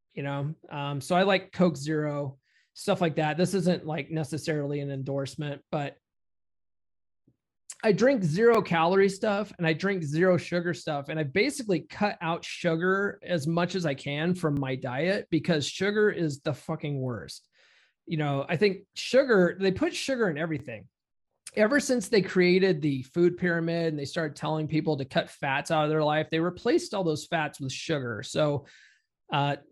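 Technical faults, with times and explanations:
2.52–2.55, 8.55–8.57, 14.57–14.60, 20.60–20.62 and 26.62–26.65 s: overlapping chunks. Every 6 s a new block starts 25 ms early, so that slice of speech plays twice, heard as a stutter-click. The waveform shows a repeated 25 ms segment and a discontinuity, and the spectrogram shows a thin vertical broadband line at each join.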